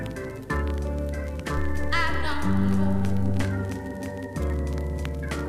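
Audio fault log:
1.57–3.43 s, DC step: the waveform's zero line shifts by about -25 dBFS and then returns. Each jump gives a low thump while the sound carries on unchanged.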